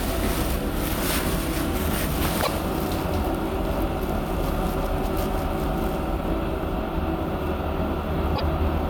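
An everyday-sound recording with two short glitches, at 2.42 to 2.49 s and 8.35 to 8.42 s. Each is a brief glitch where the sound skips forward, likely a broken MP3 bit reservoir. After a cut, frames decode using borrowed bits from the wrong frame. Each burst spans roughly three frames, which fits 26.1 ms MP3 frames. On a spectrogram they appear as thin vertical disruptions, and on the waveform as a jagged break in continuity.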